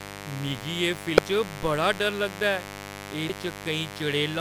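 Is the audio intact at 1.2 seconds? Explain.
No. Damaged data in a compressed stream at 1.17 s: the decoder misreads corrupted frames, loses sync and jumps to the next header, leaving a brief glitch such as a chirp, squawk, click or short hole. Mains buzz also runs through this moment: switching spikes twice per 50 Hz cycle add a raspy harmonic buzz, loud and not far below the speech.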